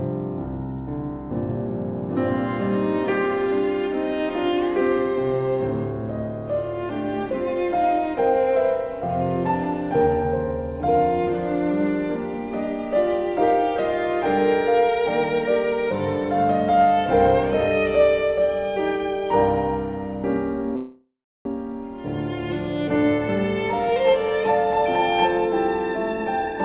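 At 20.76 s a call audio freeze begins and lasts until 21.47 s. The last sound is stretched into a fading buzz or hiss, then about 370 ms of silence follows. The likely cause is packets held up in transit, emptying the jitter buffer. The audio then resumes where it stopped, so nothing is lost, but a gap of about 0.69 s is inserted.

From 26.08 s to 26.60 s there is a jitter buffer speed-up. The receiver had built up excess delay and cut short pitch-period pieces repeatedly, removing roughly a fifth of a second. The audio runs at 133% speed with pitch unchanged, sounding clearly hurried. Through both events the call path's bandwidth stays limited, with nothing above 4 kHz.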